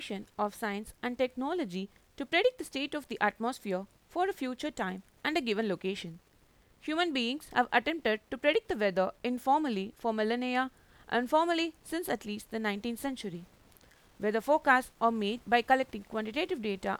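At 13.35 s a single sharp click cuts through the speech, and it is most likely dropped samples. A run of samples well under a millisecond long appears to be missing, so the waveform steps straight from one value to a later one instead of moving smoothly between them. That discontinuity is far too brief to remove any audible sound. It registers only as a click and shows up as a thin vertical line across the spectrum.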